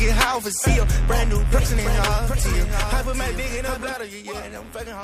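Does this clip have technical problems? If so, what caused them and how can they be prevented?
Yes. From about 1.52 to 3.92 s there's a doubled audio track: a second full-band copy trails the original by roughly 0.7 s, a bit quieter, with no decay, switching on and off abruptly. Likely a duplicate capture path or a misaligned edit. Prevent it by monitoring routing and checking edits for stacked copies.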